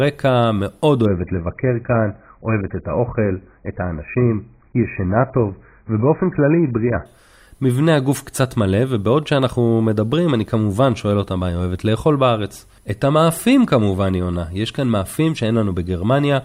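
From 1.06 to 7.06 s the adaptive stream drops to a lower bitrate: sudden, gapless dullness, with the spectrogram empty above 2.5 kHz.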